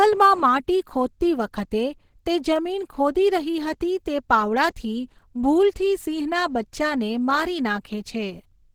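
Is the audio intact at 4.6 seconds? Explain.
No. At 4.6 s, as across the whole clip, the speech carries plainly audible Opus compression, likely at a low rate around 16 kbps in its hybrid speech mode. Thin bands are filled with noise, so it sounds grainy and somewhat hoarse, not the swirling, hollow artefacts of MP3.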